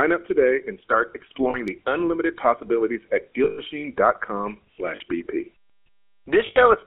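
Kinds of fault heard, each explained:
GSM full-rate codec: This is the original GSM speech coder. It models the vocal tract and drives it with a sparse train of regular pulses. Here the speech is confined to a telephone band of roughly 300 Hz to 3.4 kHz. The coding damage is plainly audible as a buzzy, gravelly roughness across the whole clip. The sound fits the 13 kbps full-rate coder.
Lost GSM frames: When a frame fails, the decoder reuses the settings of the last good frame. That repeated frame sounds like a rough, metallic ring instead of the real speech. This happens twice. The first is after "up today and start" and before "unlimited possibilities at", from 1.50 to 1.78 s. It fits two lost frames, about 40 ms. The second runs from 6.46 to 6.57 s and fits about 100 ms lost.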